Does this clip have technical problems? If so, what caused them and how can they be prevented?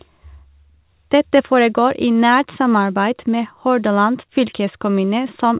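No, nothing stood out as a technical problem on listening to this speech clip.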